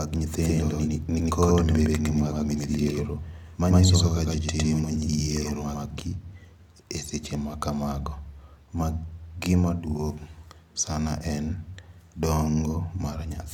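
From about 0.42 s to 6.0 s, every sound is followed roughly a tenth of a second later by an equally loud, dry copy that starts and stops abruptly. This doubled audio track likely comes from a second, slower capture path.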